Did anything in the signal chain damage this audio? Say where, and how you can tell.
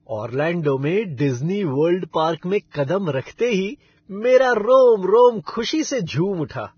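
Yes, at the codec stage: a likely low-bitrate encode later saved at a high bitrate. Nothing reaches above 6.6 kHz throughout, and the smeared speech detail stays.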